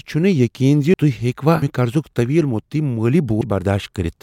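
The recording path likely fell behind and let the capture hardware overwrite samples before they were collected, a dropped buffer (overrun). At 0.94 s, 1.62 s and 3.41 s the speech jumps forward with no gap, the two sides butted together. Around a tenth of a second vanishes at 0.94 s and 3.41 s, and a little more at 1.62 s.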